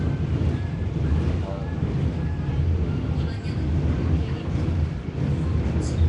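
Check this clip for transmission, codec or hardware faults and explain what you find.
One codec fault runs through the whole clip. Nellymoser compression is the likely cause. Content stops at 10.6 kHz, and the damage is plainly audible as a rough, hissy, smeared texture. Starved bands get noise fill instead of signal, consistent with a rate near 44 kbps.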